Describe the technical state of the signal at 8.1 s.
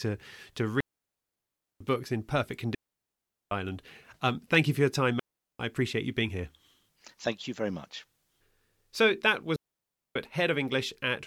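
At 8.1 s the speech signal is intact, with no audible fault at that moment.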